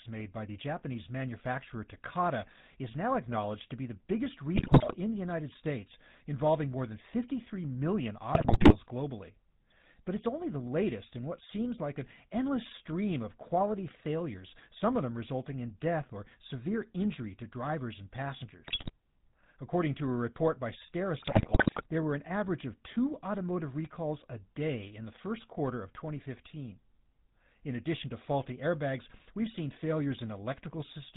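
The whole clip has passed through the GSM full-rate codec, which rebuilds the voice from a vocal-tract filter driven by a sparse pulse excitation and discards everything above 4 kHz. The result is plainly audible: the speech sounds muffled at the top and has a persistent buzzy, gravelly roughness, consistent with the 13 kbps full-rate mode.

GSM bit errors then corrupt the decoder's filter, pitch and gain parameters in four bursts, each lasting a fraction of a second. The first runs from 4.55 to 4.96 s, right after "to be the biggest". The second runs from 8.32 to 8.75 s. The third, from 18.66 to 18.91 s, follows "injury to drivers and". The fourth runs from 21.22 to 21.87 s, between "to a report by" and "there were an average". Each burst bends the spectrum and throws the level around frame by frame, so the speech breaks into squawks, pops and gargling.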